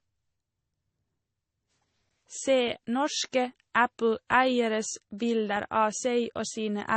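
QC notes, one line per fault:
Throughout, transcoding between lossy codecs: the speech has nothing above 8.3 kHz, with two different layers of coding grit heard together. That's likely an MP3 pass then an AAC-LC pass, both at low rates around 32 kbit/s, the second re-coding the first one's artefacts.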